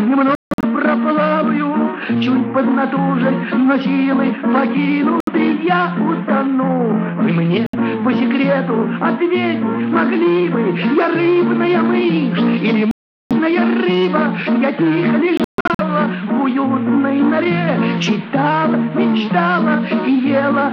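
The audio cuts out five times, most likely from a Bluetooth dropout where packets missed their delivery window and were discarded. Abrupt silent gaps fall at 0.35 to 0.65 s, 5.20 to 5.29 s, 7.66 to 7.75 s, 12.91 to 13.33 s and 15.37 to 15.81 s, and after each one the sound resumes further along, as though it kept playing underneath. The first and last gaps are broken into several short holes, with the longest unbroken silences about 160 ms and 140 ms.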